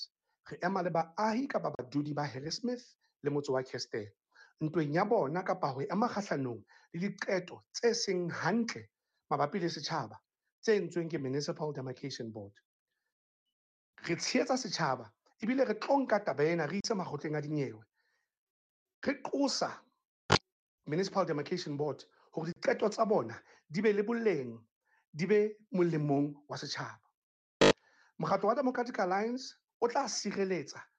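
The sound cuts out three times, at 1.75 s, 16.80 s and 22.52 s. Each gap lasts about 40 ms. Playback then resumes further on, as if it kept running. This is likely a Bluetooth dropout, where late packets were discarded, about two per gap.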